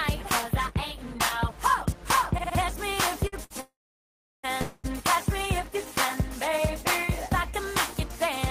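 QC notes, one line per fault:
3.27–3.34 s and 3.44–3.52 s, short stall from a late packet: the sound is held for 50 ms and then 61 ms while the jitter buffer sits empty, then resumes from the same point. Nothing is lost, but playback falls behind by those amounts.
3.60–4.45 s and 4.61–4.86 s, call audio freeze: the sound stops advancing, likely because packets were held up in transit. In the first, the last sound is stretched into a fading fill and then 720 ms of silence, 830 ms in all. In the second, 224 ms is filled with no silence. Each resumes where it stopped, adding delay rather than losing audio.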